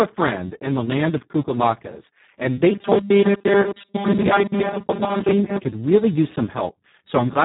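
From start to finish the speech carries Speex codec damage, and it is heavy: the sound is hoarse, noisy and edging toward robotic, as the encoder has too few bits to describe the excitation, which fits a very low setting near 4 kbps. On a spectrogram the energy stops at a flat ceiling around 3.8 kHz with nothing above it, and the harmonics below look smeared and grainy instead of cleanly striped.

From 2.72 s to 5.59 s, ending just before "could really use", robotic sound from repeated short buffers takes over. The speech becomes a rigid metallic buzz at 200 Hz that roughly tracks the words. This is likely from audio arriving too rarely while a tiny 5 ms slice is replayed to fill the gaps, so most of that stretch is repetition instead of new material. A spectrogram shows evenly spaced horizontal lines at multiples of 200 Hz, and the waveform shows repeating 5 ms cycles.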